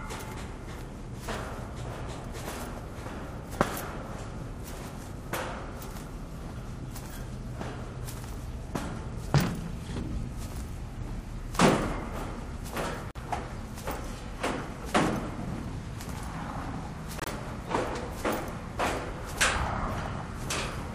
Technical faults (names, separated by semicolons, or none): corrupt frame muted